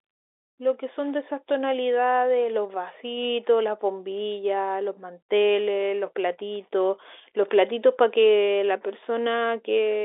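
No technical faults occur anywhere in this speech clip, which carries the narrow band of an ordinary telephone line.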